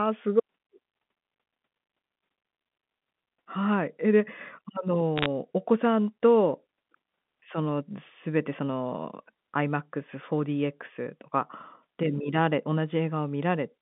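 From 5.18 to 5.26 s a brief burst of sharp ticks and crackle rides over the band-limited telephone speech. These are bit errors on a digital phone line: bits flipped at around half a percent each corrupt one G.711 sample, and sign or high-bit hits snap into clicks.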